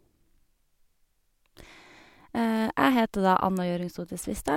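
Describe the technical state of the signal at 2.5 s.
At 2.5 s the speech signal is intact, with no audible fault at that point.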